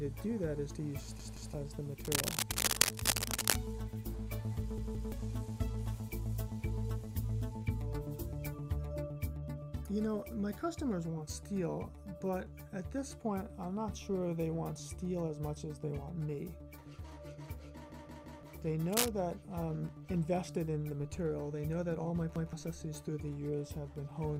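At 1.20 to 1.54 s and again at 4.78 to 5.12 s, a repeated buffer occurs. New audio arrives late, so one block of about 171 ms, which fits an 8192-sample buffer, plays twice more. The result is a stuttering loop with hard joins, and roughly a third of a second of audio is lost. On a waveform, identical segments sit side by side. On a spectrogram, the same pattern repeats with vertical edges at each seam.

Between 2.05 and 3.57 s, dense, irregular scratching sits over the sound, somewhat louder than the audio itself. This is cable scratch noise, likely from a worn cable or connector being moved. It shows as ragged broadband speckle on the spectrogram and spiky fuzz on the waveform.

At 17.92 to 18.43 s, the buffer repeats three extra times, and about half a second goes missing.

A brief scratch burst follows at 18.92 to 19.08 s.

At 22.36 to 22.53 s, there is a single extra repeat.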